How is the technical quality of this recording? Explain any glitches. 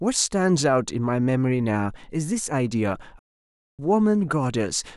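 One fault stands out in this speech recording: a playback stall from 3.19 to 3.79 s. The sound cuts off abruptly in mid-flow and the output drops to silence for about 0.6 s (595 ms) before the speech picks up again. The likely cause is the player running short of buffered data, or its playback thread being held up, so nothing reached the output until it recovered.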